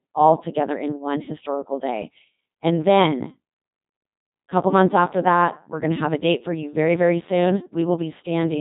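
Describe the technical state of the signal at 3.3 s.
Codec 2 vocoder processing affects 3.3 s, as it does the whole clip. The speech is resynthesised from sine waves driven only by pitch, voicing, energy and a spectral envelope, at a rate that fits about 2.4 kbit/s. It sounds heavily robotic and buzzy, with nothing above 3.8 kHz.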